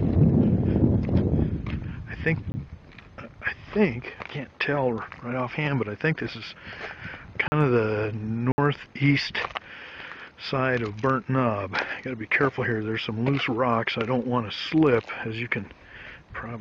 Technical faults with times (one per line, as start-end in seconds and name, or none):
2.52-2.54 block of digital silence
7.48-7.52 block of digital silence
8.52-8.58 block of digital silence